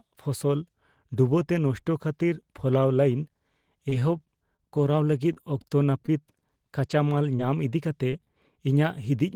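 Speech recording damaged by network delivery problems in three ways. Between 3.89 and 4.82 s, repeated packet loss (robotic sound) breaks the stream five times. Each gap, the longest 22 ms, is patched by extending the preceding sound, so about 75 ms of synthetic fill covers roughly 40 ms of lost audio, around 8% of that stretch. Because the patches arrive in quick succession, the speech turns choppy, with fragments dropping out.

Short concealed packet loss follows at 5.33–5.38 s, 6.88–6.91 s, 7.37–7.41 s, 8.11–8.14 s and 8.24–8.28 s. Each time about 20 ms of audio never reaches the decoder, and the receiver bridges the hole with 15 to 24 ms of continued pitch or shaped noise before blending back into the real signal. Each one is heard as a brief smear or wobble, and the last two are only a tenth of a second apart.

At 6.06–6.10 s there is a short stall from a late packet. The packet arrives about 17 ms behind schedule, the jitter buffer empties, and the receiver stretches the last sound by 17 ms until the packet turns up, then carries on from the same point. 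Nothing is lost here, but that moment of speech is held slightly too long, with a faint buzz or dip.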